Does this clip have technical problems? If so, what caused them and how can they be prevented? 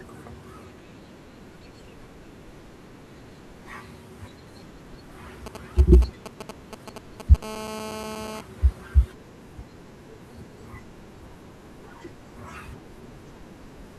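Yes. From 5.46 to 7.37 s, a nearby 2G phone's GSM signalling bursts are rectified by the audio circuitry, producing a galloping dit-dit-dit of short 217 Hz buzzes only a little below the speech. Keeping phones away from the recording chain, or switched to flight mode, prevents this.

From 7.43 to 8.41 s, GSM phone buzz takes over as the phone transmits in bursts 217 times a second, as in a call, giving a steady, raspy 217 Hz buzz with many harmonics about 6 dB below the speech. Shielded, balanced cabling and phones kept well away from microphones and preamps prevent it.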